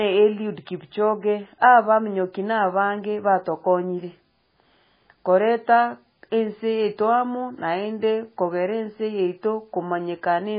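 Throughout, the speech sounds watery and swirly, with nothing above 5 kHz and metallic, flickering s sounds. This is likely heavy MP3 compression at a very low bitrate near 16 kbps. Unlike a plain low-pass filter, weak frequency components switch on and off between frames.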